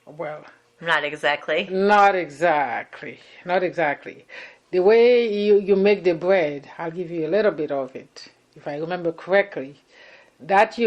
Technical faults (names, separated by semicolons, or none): none